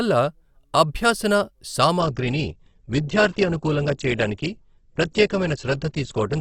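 Speech clip with an adaptive stream at a lower bitrate from 2.0 s to the end: quality drops abruptly without a gap, treble vanishes above 8.2 kHz and codec artefacts rise, consistent with a switch from roughly 64 to 12 kbit/s Opus.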